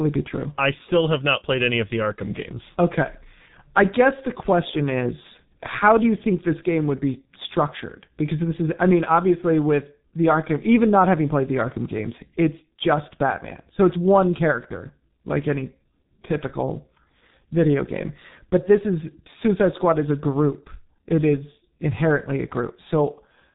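G.723.1 codec damage runs through the whole speech clip. Nothing above about 3.8 kHz survives, and the slow-updating vocal model in 30 ms frames leaves the voice muffled and hoarse with smeared consonants, heavy damage that fits a rate near 6.3 kbit/s.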